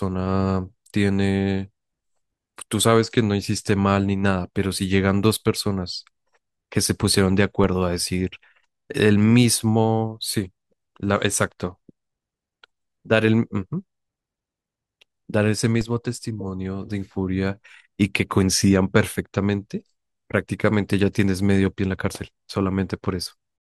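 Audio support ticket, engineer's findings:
DC step at 7.64 s and 15.81 s: low thump, speech continues unaffected. Baseline jumps about -19 dBFS, then bleeds back through a roughly 20 Hz high-pass. Probable converter recalibration or offset input switched in. Unlike a dropout, no signal is lost.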